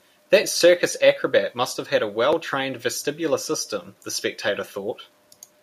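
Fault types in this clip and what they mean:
Low bit depth without dither: the speech carries a grainy distortion that tracks its level, with the error sitting around 40 dB below the signal, likely from truncation to about 10 bits. Unlike dithered quantisation's steady hiss, this grit rises and falls with the speech.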